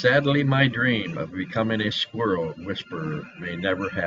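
Nothing goes wrong anywhere in this bit of speech, so there's no fault to point to.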